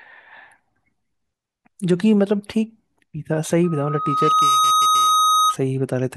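From 3.63 s to 5.56 s a loudspeaker feedback squeal takes over the speech. A single tone at 1.3 kHz swells over about a second until it sits roughly 5 dB above the voice. The microphone is re-amplifying its own loudspeaker at that frequency. It is told apart from a steady hum or test tone by that self-feeding build-up.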